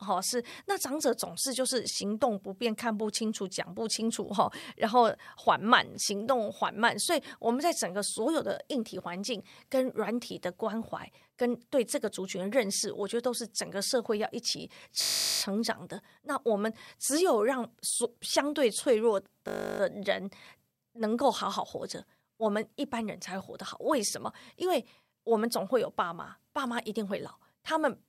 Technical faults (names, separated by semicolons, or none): system hang loop